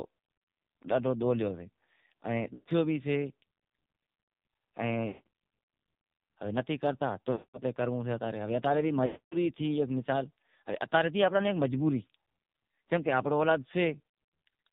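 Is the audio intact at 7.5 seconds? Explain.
No. From 7.32 to 7.59 s the voice smears into a held, buzzy tone that fades to silence before speech resumes. These are lost AMR speech frames: the decoder repeated its last good pitch and vocal-tract settings with falling gain across a gap of about 220 ms, which fits a run of eleven 20 ms frames. Under that, the AMR narrowband mobile codec is heavy here, giving a muffled voice with nothing above 4 kHz and a buzzy, synthetic edge that points to a very low mode of about 5.9 kbps.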